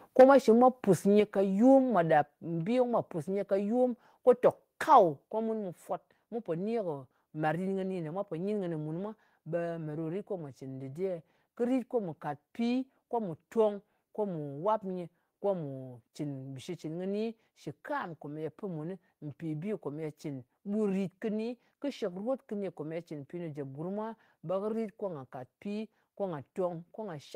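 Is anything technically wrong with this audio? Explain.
Yes. From 0.19 to 0.3 s the speech peaks are flattened with a harsh crackle, about 6 dB over full scale with around 7 percent of samples clipped, likely microphone overload at the converter.

Abrupt level drops of about 4, 5, 3 and 4 dB occur at 0.21, 1.2, 2.22 and 5.28 s, likely the microphone volume being stepped down by the call software.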